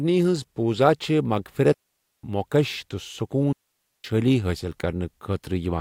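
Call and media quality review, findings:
Digital wireless dropout, twice: 1.73–2.23 s and 3.53–4.04 s. Clean holes of near silence, about half a second each (0.51 s, 0.52 s). Sound just stops with a very quick fade and comes back, no noise burst either side. Probable component: digital wireless link, receiver end. Receiver lost too much data on the link and muted rather than pass garbage. Worth checking range, antenna placement and RF interference.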